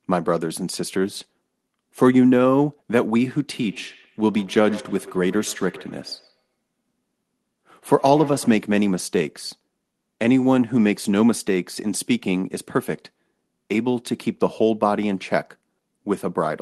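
From 3.61 s to 8.68 s this speech clip carries a feedback echo between two devices: the sound comes back roughly every tenth of a second, each pass thinner and more ringing, peaking about 19 dB below the speech. A second device in the same room is replaying the call, and this microphone recaptures it; the local echo canceller cannot remove audio it did not play itself. The call path, audible as Opus coding with a 12 kHz cut-off, is not part of the fault.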